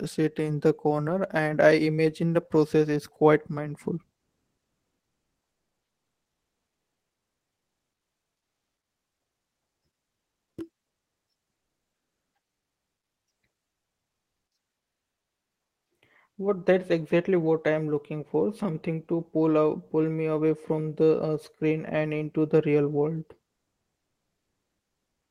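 Speech in which the sender likely stopped transmitting during pauses (Opus discontinuous transmission), so the receiver filled the gaps with comfort noise in place of the background at 4.17–9.81 s, 10.07–10.57 s, 10.87–11.27 s and 12.57–13.27 s. The faint background, about 63 dB below the loudest passages, becomes a smoother noise of a different tone and drops about 4 to 7 dB until the speech resumes.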